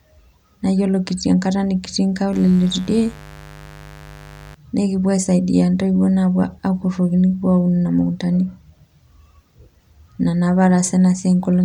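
It's a speech clip with a stretch of mains buzz from 2.33 to 4.55 s, ending just before "naa ekipuo". It's a raspy 50 Hz buzz sitting roughly 20 dB under the speech. Sharp switching spikes from a dimmer, rectifier or poor shielding are spraying harmonics well up into the kilohertz range.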